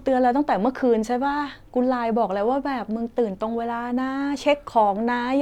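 No technical faults are audible.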